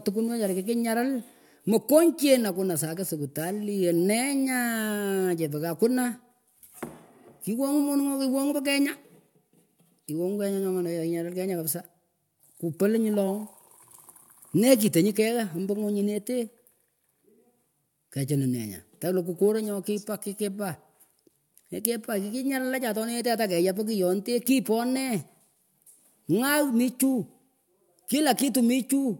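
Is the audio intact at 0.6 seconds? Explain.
Yes, the audio is intact at 0.6 seconds, with nothing at that moment breaking up or altering the sound.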